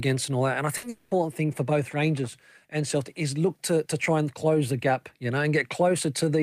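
A burst of packet loss at 0.77 to 0.85 s, right after "all that and I", in this speech clip, replaces about 60 ms with a held, fading continuation of the last sound before the speech skips ahead. A long network dropout then follows at 0.89 to 1.13 s, just before "thing for both": about 220 ms of speech is gone, covered by a buzz or hiss that fades without reaching silence. Audio likely stopped arriving there, and the receiver stretched the last sound across the gap.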